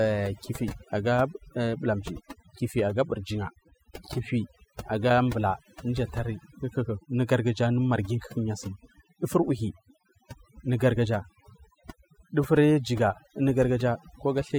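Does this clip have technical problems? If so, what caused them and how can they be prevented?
Yes, there's overdone noise removal running through the whole clip. The reducer was pushed too hard, cutting any frequency band close to its noise estimate and taking the quiet parts of the speech with it, so the background drops and breaks up into twinkling specks. Next time, go easier on the reduction amount, or capture less noise at the source.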